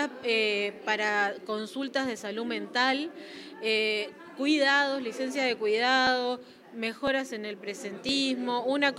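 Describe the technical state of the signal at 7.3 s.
At 7.3 s the signal is inside a run of periodic USB or driver dropouts lasting from 6.07 to 8.09 s. A stalled bus or driver skips around 10 ms of audio every 1.01 s, producing regular ticks that appear as abrupt waveform discontinuities and thin full-height vertical lines on a spectrogram.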